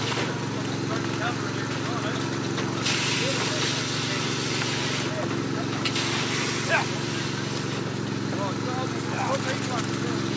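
No technical faults can be heard anywhere in the clip. It has passed through a call's microphone processing, so the lowest bass has been trimmed away and nothing is present above 8 kHz.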